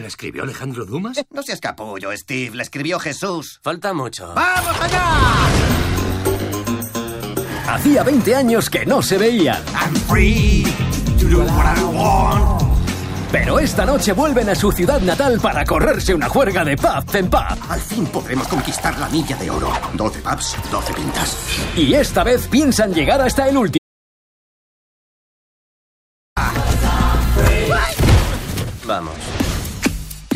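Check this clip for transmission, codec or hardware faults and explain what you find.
One fault is present. From 23.78 to 26.37 s there is an audio dropout to silence, likely a lost input link, leaving 2.58 s of silence: a flat waveform and a blank spectrogram band.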